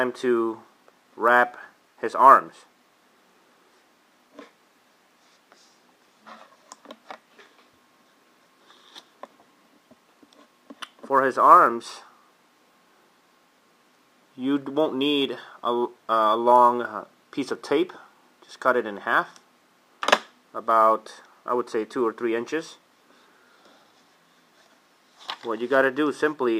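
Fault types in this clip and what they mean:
No faults detected in this audio.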